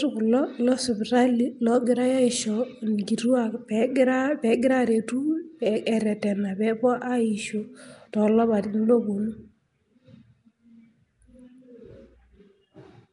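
Nellymoser compression runs through the whole of this speech recording, with codec damage that is plainly audible from start to finish. The sound has a rough, hissy halo and a smeared, underwater character, and nothing is present above 10.6 kHz. That is most likely Flash-era Nellymoser Asao coding, at a rate that fits about 44 kbps. Its fixed bits-per-sample budget starves the weaker bands, which get filled with noise instead of the original detail.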